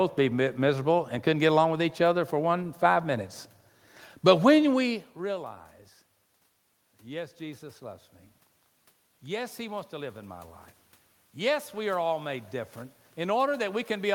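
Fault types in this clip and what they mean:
Automatic gain rising: the gain control judged the input too quiet and turned itself up gradually, lifting the level by about 3 dB between 9.22 and 10.55 s. Because it amplifies everything, the room noise swells together with the speech, unlike the talker's movement around 4.5 s, which changes only the voice. On a waveform the envelope widens smoothly across those 1.3 seconds. On a spectrogram every band, including the noise floor between syllables, brightens at once.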